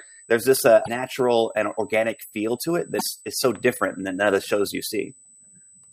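A steady USB whine sits under the speech throughout. It is a fixed 8 kHz tone, roughly 25 dB below the voice, from bus current leaking into the audio ground.

Damaged data in the compressed stream breaks through at 0.82 to 0.88 s and again at 2.97 to 3.02 s. The decoder loses sync, producing brief glitches.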